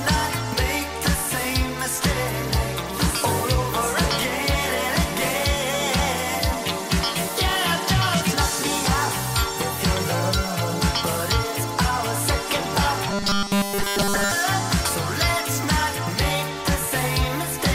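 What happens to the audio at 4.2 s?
Nothing goes wrong at 4.2 s; the audio plays through that moment intact, with no dropout, click or distortion.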